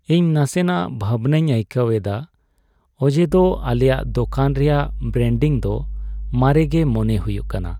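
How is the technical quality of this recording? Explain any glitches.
The recording has one clear fault: mains hum appears at 3.28 s and continues to the end. A ground loop or nearby transformer is leaking the 50 Hz power supply into the speech path, giving a steady, fairly loud buzz. Unlike broadband rumble or handling noise, it holds one fixed pitch and never varies.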